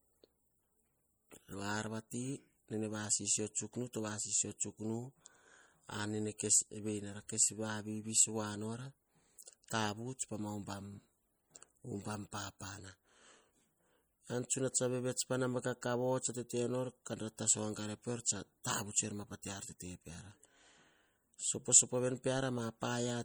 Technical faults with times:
0.00-23.24 MP3 compression

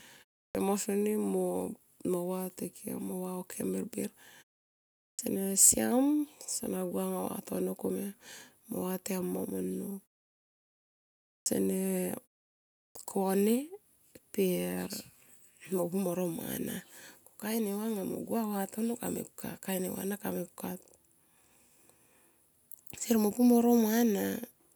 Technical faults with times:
0.49-0.55 clipped start after a pause
5.12-5.19 clipped start after a pause
11.40-11.46 clipped start after a pause
12.89-12.95 clipped start after a pause

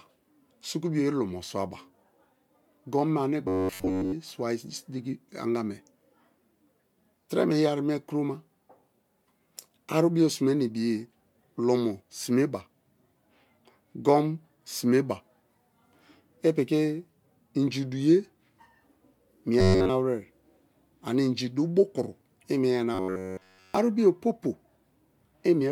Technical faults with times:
3.48-4.13 robotic sound from repeated short buffers
19.59-19.90 robotic sound from repeated short buffers
22.94-23.74 robotic sound from repeated short buffers

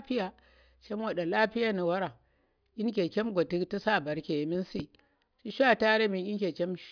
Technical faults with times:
none

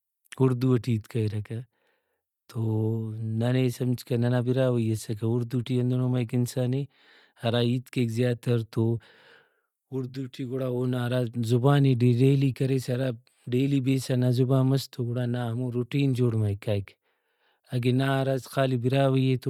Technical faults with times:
0.00-19.49 Bluetooth LC3 compression

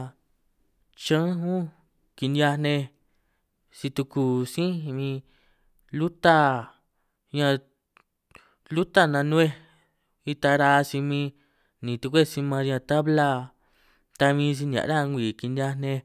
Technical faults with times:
none

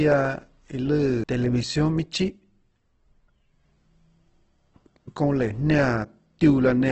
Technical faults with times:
0.00-6.91 Opus compression
1.24 CD skip

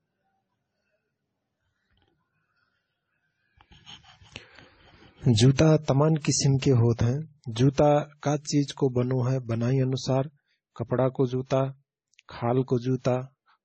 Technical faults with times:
0.00-13.65 transcoding between lossy codecs

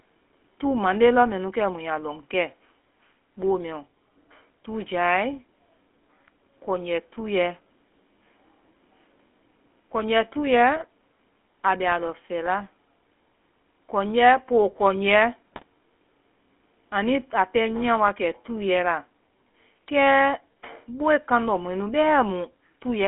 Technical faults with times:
0.00-23.07 GSM full-rate codec
10.76-10.84 GSM bit errors
15.52-15.68 GSM bit errors

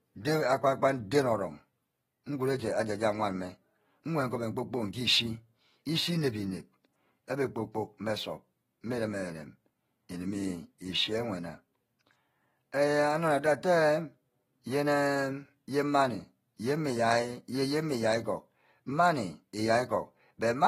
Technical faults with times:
0.00-20.67 AAC compression

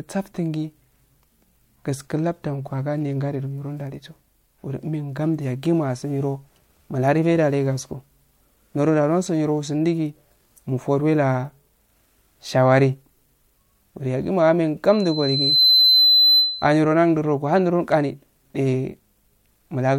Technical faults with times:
14.86-16.81 loudspeaker feedback squeal

